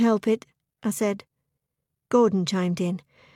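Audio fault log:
No faults detected in this audio.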